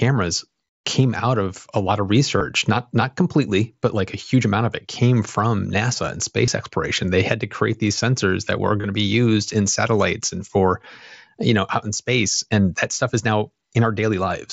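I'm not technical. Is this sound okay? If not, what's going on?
No. Concealed Bluetooth headset packet loss causes brief glitches at 2.38–2.41 s, after "of a lot of", at 6.46 s, and at 8.81–8.84 s, between "these sensors that were" and "to be used in". Unlike a dropout into silence, each tiny gap is filled by repeating the sound just before it, giving a short buzzy blip.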